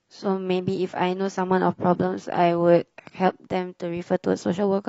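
From the start to 3.39 s the speech sounds dull and smeared, with the treble largely gone and a swirly, watery edge from stronger codec artefacts. At 3.39 s it turns suddenly brighter and cleaner, with no gap in the audio. This is an adaptive stream starting at a low bitrate. The player began on a cheap version to start quickly, which fits AAC at around 24 kbit/s, then stepped up to a fuller one, which fits about 96 kbit/s, once it had gauged the connection.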